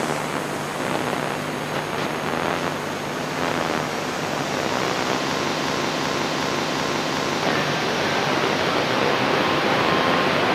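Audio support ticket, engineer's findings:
System hang loop, 5.57 to 7.43 s. Host or driver stalled while the audio hardware kept replaying its ring buffer. The same 0.37 s slice of sound repeats five times at about 2.7 per second, a slow, exact stutter. Loop length fits a 16384-sample buffer. When playback resumes, roughly two seconds of audio are missing. Probable component: audio driver or its servicing thread failing to refill the DMA buffer.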